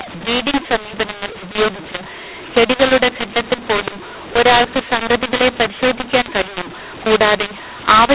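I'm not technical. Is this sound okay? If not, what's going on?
No. From start to finish the speech sounds harsh and gritty, and the gaps between phrases fill with hiss. This is a mu-law and A-law mix-up: the telephone audio was packed one way and unpacked the other, so loud and quiet parts come out at the wrong levels.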